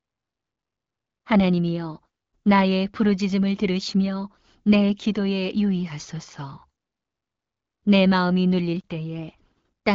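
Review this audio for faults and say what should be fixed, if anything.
Nothing to fix: the speech shows the expected band limit of an AMR wideband (HD Voice) link, with nothing above about 7.4 kHz and only the light coding texture that fits a rate around 12.65 kbit/s.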